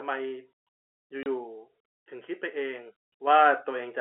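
A packet went missing in transit at 1.23 s, and the receiver played silence in its place instead of concealing the gap. The result is packet loss filled with silence: the speech drops out completely for 30 ms, until 1.26 s, with hard edges at both ends. A hole that short and clean suggests a single lost packet. The sound comes through a telephone-band G.711 path, limited to roughly 300 Hz to 3.4 kHz, and that narrow band is heard on both sides of the hole. Later, at 3.27 s, the call software judged the microphone too quiet and raised the device's input volume in one jump. This microphone volume stepped up by 6 dB, about double the amplitude, so the speech and the background noise behind it get louder together in an instant. Because the change is abrupt rather than a gradual ramp, it comes across as a sudden lift in loudness, not as a natural change in how the speaker is delivering the words.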